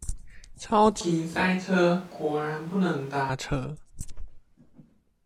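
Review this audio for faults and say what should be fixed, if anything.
From 1.01 s to 3.29 s the speech turns roomy and hollow, with thinner bass. It drops by around 5 dB. Room noise sits roughly 25 dB below it. Both edges are abrupt. This is likely a switch to a distant microphone. Monitor the close microphone's feed during recording, and fit a backup close microphone.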